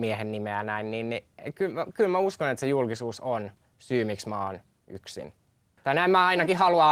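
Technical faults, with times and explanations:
No technical faults can be heard in the speech, and the signal stays steady and intact for its whole duration.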